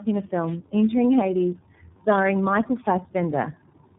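Right from the start there's tandem speech coding: two low-rate speech codecs in a row, each re-coding the other's damage, so it's rough, warbly and muffled with nothing above 3.8 kHz. Then from 0.40 to 0.58 s a wireless microphone noise hit comes through, a short swish of static as the radio link fades and receiver noise rises.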